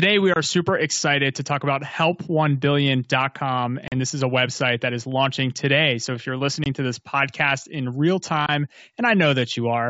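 At 0.34 to 0.36 s, just before "super excited to talk", a block of digital silence drops out about 23 ms of speech, which fits a 1024-sample buffer that was not filled in time. The sound cuts to zero and back with no fade, so it is heard as a short hole, and the speech resumes exactly as it was.

At 3.88 to 3.93 s, packet loss on an ADPCM call leaves a 40 ms hole, about two packets. It happens again at 6.64 to 6.67 s, a 20 ms gap of about one packet between "if you're" and "to this podcast in". The decoder's adaptive predictor and step size lose track of the sender's during the gap, so the speech does not resume cleanly. It comes back slightly distorted, then settles over a few tens of milliseconds. That recovery period is what sets it apart from the clean return after a silence block. These losses sit on the G.722 wideband path, which keeps the speech bright up to about 7 kHz.

At 8.46 to 8.49 s, right after "this podcast in real", a second block of digital silence of the same 23 ms length fits the same 1024-sample buffer. 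It gives the same short hole and an immediate return to normal level.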